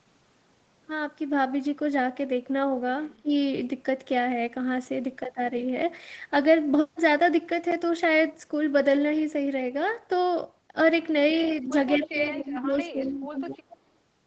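At 3.09 to 3.13 s a faint delayed copy of the speech slips through. It sits about 35 dB below the talker and trails by roughly 264 ms. This is an echo leak. The likely cause is a loudspeaker on the far end whose echo canceller left a residue that was sent back. Right after, from 3.22 to 3.31 s, the speech dips sharply, by around 20 dB. This is speech suppressed in double talk. Both sides were likely talking at once, and the canceller turned the talker down with the echo. The same suppression returns at 11.62 to 11.74 s, milder at around 10 dB. It comes back again from 11.97 to 13.4 s, where the speech is turned down for about a second in total, again by up to 20 dB. Inside that stretch, from 12.03 to 12.28 s, a stronger echo leak comes through. It is about 15 dB down and delayed about 271 ms. A last short echo leak, about 25 dB down with a 272 ms delay, falls at 13.7 to 13.77 s. All three echoes share nearly the same delay. 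That points to a single, stable acoustic path. Throughout, the band stops at 8 kHz, which fits the Opus call path.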